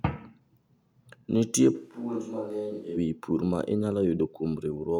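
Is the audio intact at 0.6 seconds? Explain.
Yes, the speech at 0.6 seconds plays through intact, with no dropout, click, distortion or other fault at that moment.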